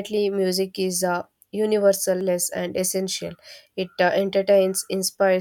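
At 2.21 s the speech is hit by damaged data in a compressed stream: corrupted bytes make the decoder misread a frame and lose sync until it finds the next header. This comes out as a short glitch in the speech.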